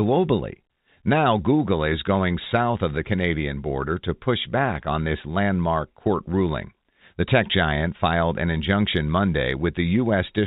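The speech comes through narrowband telephone coding consistent with G.711 A-law at 64 kbps, with no content above 4 kHz and at most a faint level-following quantisation hiss beneath it, and no technical faults can be heard anywhere in the clip.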